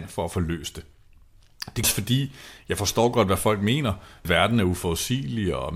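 At 1.84 s, just before "fordi jeg forstår godt", and again at 4.25 s, right after "godt hvad folk mener", the speech is broken by a brief glitch. Both are damaged data in a compressed stream: corrupted bytes make the decoder lose frame sync and skip ahead.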